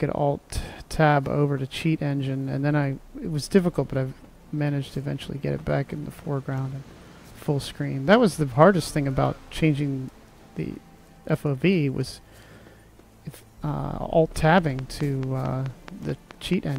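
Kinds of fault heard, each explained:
Train of clicks: a burst of similar clicks ticks over the audio from 14.36 to 16.77 s, about ten at a steady 4.6 per second, likely interference.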